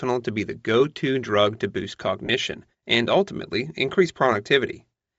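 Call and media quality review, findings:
Breathy, grainy edge on the speech across the whole clip, upper band thinned and noise-filled. Likely Bluetooth LC3 compression at a low rate, around 32 kbps with 10 ms frames: upper spectrum zeroed, then noise-filled.

Lost LE Audio frames at 2.26–2.29 s, between "to drug to boost" and "and ultimately increase". Brief noisy smear, about 30 ms, consistent with three 10 ms frames dropped. LC3 concealment repeated the last spectrum with randomised signs.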